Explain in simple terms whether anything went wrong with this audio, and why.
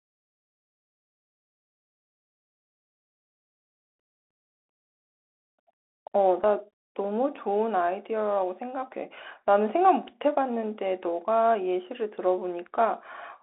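The speech went through a Bluetooth CVSD headset codec throughout, which cuts everything above about 3.8 kHz. The speech sounds thin and muffled, with scratchy s sounds and a grainy hiss underneath.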